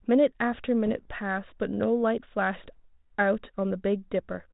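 Speech with pops and rough bursts, brief level jumps ringing on, at 0.86–1.08 s and 2.59–2.76 s: bit errors on an ADPCM link, which fits 32 kbit/s G.726, upsetting the decoder's predictor and step size.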